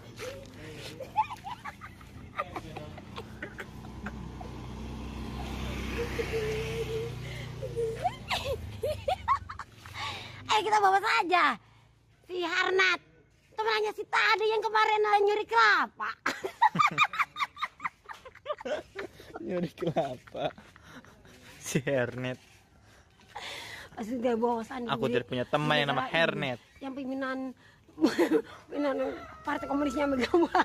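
Nothing stood out as a technical problem anywhere in the recording on listening.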